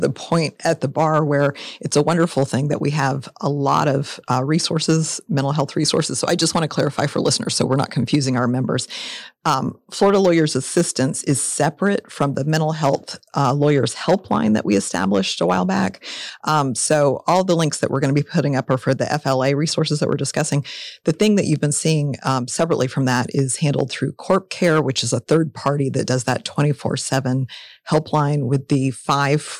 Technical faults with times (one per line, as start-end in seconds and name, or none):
0.00-29.60 hard clipping